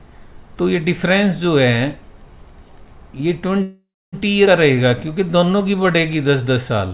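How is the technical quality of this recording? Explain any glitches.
The recording has three glitches in its second half. The sound is band-limited to nothing above 4 kHz, which fits a G.711 A-law call codec.

From 3.62 to 4.16 s there is a call audio freeze, likely caused by delayed packets draining the jitter buffer. The last sound is stretched into a fading buzz, filling about half a second in all and ending in roughly 0.27 s of silence. Nothing is lost, which distinguishes it from a dropout.

From 4.46 to 4.50 s, a skip ahead removes about a fifth of a second. The two sides are joined almost seamlessly, so material is missing with no audible gap.

From 4.75 to 6.94 s, a jitter buffer slow-down plays the audio at 92% speed, adding 176 ms by repeating pitch periods. The sound is drawn out at unchanged pitch, unlike a freeze's decaying buzz.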